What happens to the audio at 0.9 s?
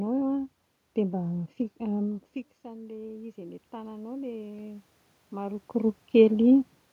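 At 0.9 s the speech carries on intact, with no dropout, click, distortion or other fault at that moment.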